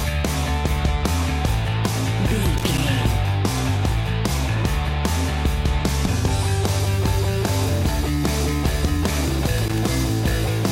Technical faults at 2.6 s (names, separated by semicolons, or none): loose connector crackle